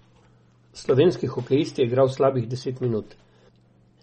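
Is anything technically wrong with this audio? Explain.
Yes. Throughout the speech, nothing is heard above 8.4 kHz, and the sound turns watery and swirly, with smeared consonant attacks. This is likely MP3 compression at a low bitrate, around 32 kbps. The encoder lops off treble and drops weak frequency components that flicker between frames.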